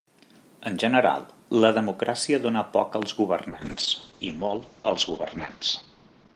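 It's a speech recording with two clear problems. At about 3.03 s there's a single loud pop, a sharp click sitting roughly 15 dB above the speech, while the talking carries straight on underneath. A pulse that short and that isolated is most likely a voltage spike getting into the chain, from something like a connector being knocked, a switch, a static discharge or a driver hiccup, which the downstream electronics then shape into that thump. Then from 3.51 s to the end you get a call bitrate drop. The speech turns rough and watery, and the top end gets cut off, with the audio band narrowing from around 20 kHz down to about 8 kHz. That fits the call's bandwidth estimate collapsing and the Opus encoder being pushed from somewhere near 40 kbps down to roughly 8 kbps. It sits at its worst for about 2.1 s and doesn't recover before the clip ends.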